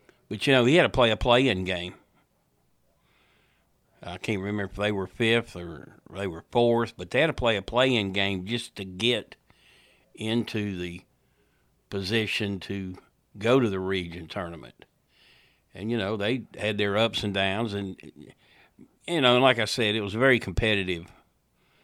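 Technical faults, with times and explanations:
Nothing here to flag: the speech comes across without any technical trouble worth noting.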